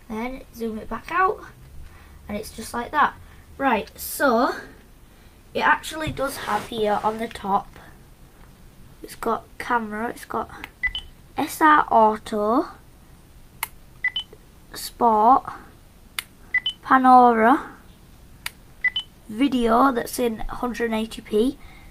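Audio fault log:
The signal shows no audible technical faults at any point in the recording.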